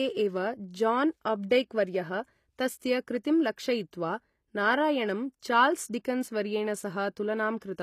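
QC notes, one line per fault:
throughout: HE-AAC compression. The treble is likely being rebuilt from copies of lower bands rather than coded directly, which fits a low-bitrate HE-AAC stream around 24 kbps. Because only the lower spectrum carries real detail and the upper range is synthesised under a coarse envelope, harmonics above the crossover do not line up with those below. The codec damage is plainly audible across the speech, with s sounds and other high content coming out gritty, metallic or lispy rather than natural.
3.24 s: pre-echo. A transform block containing a sharp attack near its end had its quantisation noise spread across the whole block, so noise sized for the loud onset also landed in the quiet stretch just before it. The result is a short hiss of about 10 ms leading into the attack, which arrives sounding soft and smeared instead of crisp.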